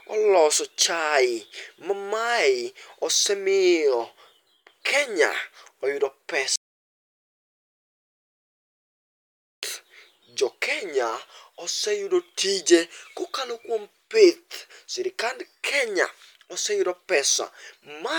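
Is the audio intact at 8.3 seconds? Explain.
No. An audio dropout to silence runs from 6.56 to 9.63 s, likely a lost input written as zeros, so the speech cuts to total silence with no room tone.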